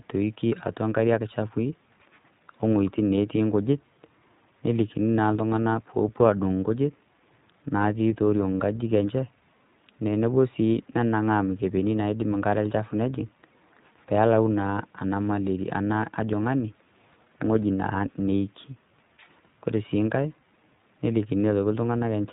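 iLBC codec damage runs through the whole clip, from start to finish. The speech has been squeezed through a narrowband VoIP coder that encodes each short frame's excitation on its own, without borrowing from the frame before. Here it works in 20 ms frames at 15.2 kbps. Nothing above about 3.8 kHz survives, so the speech sounds dull and telephone-like, with a plainly audible rough, synthetic edge.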